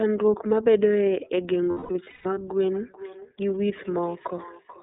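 The speech is coded throughout with the iLBC codec, whose 30 ms frames are each coded independently, which fits its 13.33 kbps mode. Only about 200 Hz to 3.7 kHz survives, so the sound is narrow and muffled, with a plainly audible rough, synthetic edge.

From 1.71 s to 2.37 s, lost iLBC frames leave the decoder repeating the last pitch cycle with added noise. About 420 ms goes missing across those 660 ms, which points to roughly fourteen lost frames. The gaps sound like a held, buzzy vowel, the longest lasting about a fifth of a second, and clarity returns almost immediately after each.

From 2.74 s to the end, feedback echo between two devices appears. One device plays back what another microphone in the same room sent, and that microphone captures it again. Each phrase returns roughly every 0.4 s, thin and ringing, peaking at about 19 dB below the speech.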